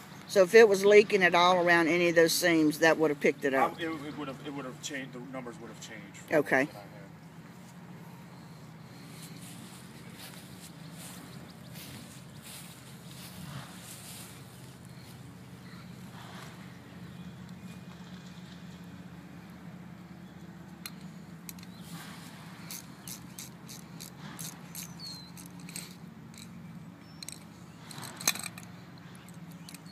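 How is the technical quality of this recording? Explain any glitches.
No glitches or faults audible.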